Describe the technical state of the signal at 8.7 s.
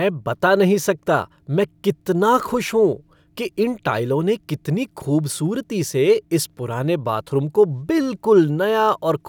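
At 8.7 s the speech signal is intact, with no audible fault at that moment.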